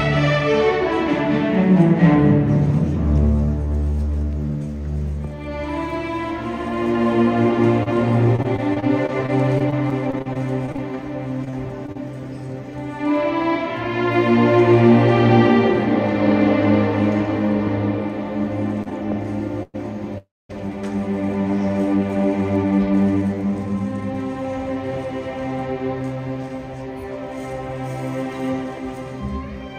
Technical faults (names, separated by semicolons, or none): repeated packet loss (robotic sound); short stall from a late packet; call audio freeze; jitter buffer speed-up